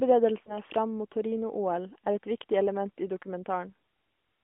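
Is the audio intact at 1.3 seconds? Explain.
Yes, at 1.3 seconds the speech is intact, carried on its narrowband mobile-codec path with no break, dropout or other fault at that moment.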